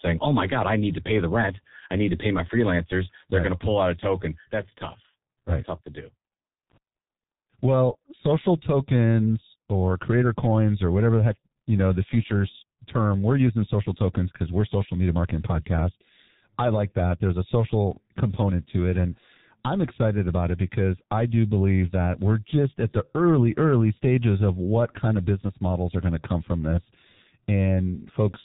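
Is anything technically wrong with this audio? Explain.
Yes. Throughout, the speech passes through a G.723.1 codec at about 6.3 kbit/s. Nothing above 3.8 kHz survives, and its slow 30 ms frames leave speech muffled, hoarse and blurred.

From 6.7 to 6.77 s there is loose connector crackle. A dirty contact makes and breaks rapidly, chopping the signal into a brief scratchy burst.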